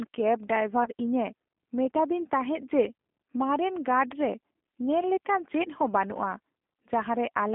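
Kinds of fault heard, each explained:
G.729 codec: The whole clip has gone through a low-rate 8 kbit/s speech codec that doesn't send the waveform at all. It sends a vocal tract filter, a pitch predictor and a handful of pulses per frame, and the decoder rebuilds the speech from those. You can plainly hear it: a rough, slightly synthetic edge on everything. The band is squeezed to roughly 250 Hz up to 3.6 kHz, so there's no real bass and no air on top.
VoIP packet loss concealed by the speech codec: Around 0.84 s a brief chunk of the stream goes missing, about 20 ms, which fits a single lost packet. Rather than leave a hole, the decoder keeps going from its last pitch and filter settings while turning the level down. That gives a short smeared patch that fades instead of silence. Because each frame is built on the one before, the disturbance lingers until about 0.90 s, past the actual gap.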